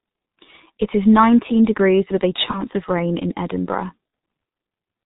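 The speech runs through the G.723.1 codec from start to finish, heavily compressed in a way that fits its 6.3 kbit/s mode. With nothing above 4 kHz and a slowly updated voice model, the voice comes out muffled and hoarse, with smeared consonants.

At 2.51 s and again at 4.10 s, VoIP packet loss concealed by the speech codec appears. About 30 ms of speech goes missing each time, consistent with a single lost frame, and the decoder fills it by stretching its last pitch and filter. The first gap leaves a fading smear lasting until about 2.65 s. The second is a brief blip ending around 4.13 s.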